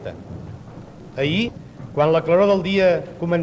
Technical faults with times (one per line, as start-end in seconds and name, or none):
1.48-1.50 skip ahead
1.57-3.40 jitter buffer speed-up